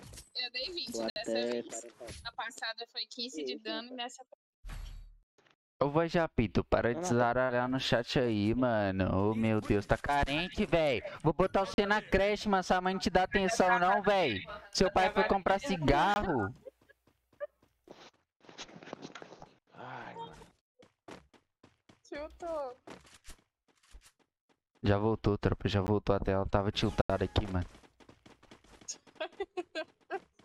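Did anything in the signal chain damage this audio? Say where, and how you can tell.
Yes. At the driver or buffer stage, five blocks of digital silence interrupt the sound: 1.1 to 1.16 s (60 ms), 11.74 to 11.78 s (40 ms), 16.14 to 16.16 s (20 ms), a 15 ms hole at 25.87 s, and 27.02 to 27.10 s (80 ms). Each drops abruptly to silence and returns with no fade. The longer gaps sound like holes, and the shortest sound like ticks. This is likely an output buffer that was not filled in time and was sent out as zeros.

At the network and codec stage, there are three short concealed packet losses: 3.13 to 3.17 s (20 ms missing), 7.45 to 7.51 s (40 ms missing), and 15.43 to 15.47 s (20 ms missing). These do not drop to silence. Each one shows a brief smear or wobble where the decoder extended the preceding sound to cover audio that arrived too late, then blended back into the real signal. The 7.45 s event is the longest.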